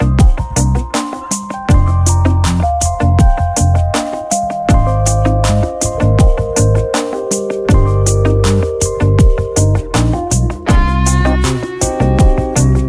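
No technical faults can be heard anywhere in the recording; the signal holds steady throughout with no interruptions or disturbances.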